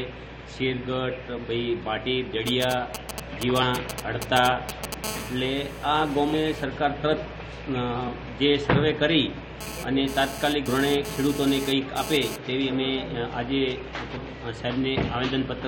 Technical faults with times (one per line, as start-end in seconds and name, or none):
2.47-4.94 GSM signalling bursts
3.61 compressed frames skipped
5.04-6.64 GSM phone buzz
6.33 compressed frames skipped
8.07 compressed frames skipped
9.61-12.36 GSM phone buzz
10.67 compressed frames skipped
14.15 compressed frames skipped